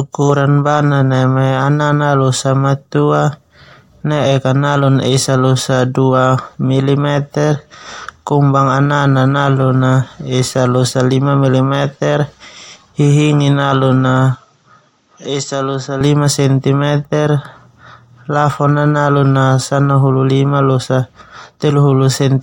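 A speech recording with one fault between 14.35 and 16.01 s: just before "centi meter" the sound abruptly turns duller and drops about 5 dB in level, with nothing above 7.7 kHz, then clears again. There is no gap at the change, and a faint new background noise, roughly 45 dB below the signal, appears with it. The likely cause is an input switched to a poorer device, with a narrower band and its own noise and tone.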